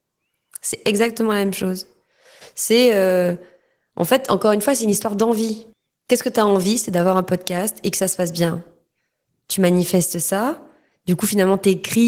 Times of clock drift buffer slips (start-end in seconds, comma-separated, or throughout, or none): none